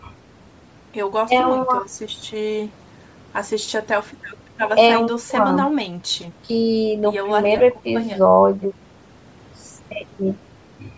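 Throughout the speech, the upper frequencies carry a breathy, grainy edge, likely from Bluetooth LC3 compression. The damage fits a bitrate of about 32 kbps, where the codec zeroes much of the upper spectrum in 10 ms frames and fills the gaps with noise. On a spectrogram the top band looks speckled and patchy, and energy stops at 8 kHz, the limit of the call microphone processing.

From 7.58 to 7.60 s, lost LE Audio frames cause a dropout. The decoder reused the last spectrum with randomised signs, so a brief noisy smear replaces the sound, consistent with two missing 10 ms frames. A spectrogram shows a short column of flat, diffuse noise where the harmonics break, and the waveform loses its periodic shape there.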